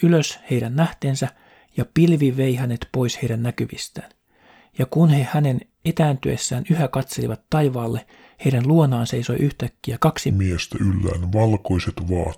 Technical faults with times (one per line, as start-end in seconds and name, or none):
10.31-12.38 section at the wrong speed